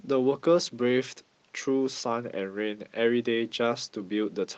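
Nothing technically wrong can be heard in this speech recording. It has come through a WebRTC call path using the Opus codec, so it carries that codec's usual coding noise and its high frequencies stop at about 8 kHz.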